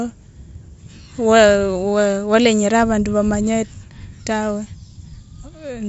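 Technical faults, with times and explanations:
No technical faults can be heard anywhere in this speech.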